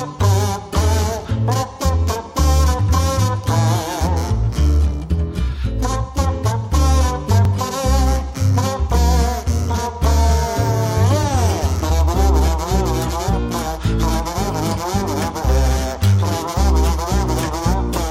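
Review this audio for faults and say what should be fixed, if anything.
A brief click or stutter lands at 2.44, 7.45, 12.47 and 17.48 s, every 5 seconds. These are overlapping chunks: each 5-second block starts about 13 ms before the previous one ends, so that sliver of sound plays twice at every join. To prevent it, trim or crossfade each block's overlap exactly when reassembling the stream.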